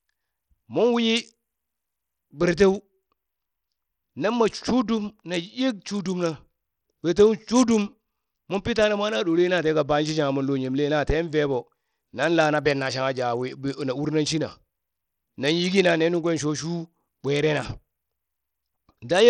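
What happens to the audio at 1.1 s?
At 1.1 s the speech carries the same damage as the rest of the clip: the treble thins and flickers in and out, and a gritty noise with aliasing sits on the voice. The likely cause is Bluetooth SBC compression at a low bit pool, which fits about 80 kbps. The weak upper sub-bands get few or no bits and the rest are coarsely quantised. A spectrogram shows the top band broken into patchy, blinking blocks.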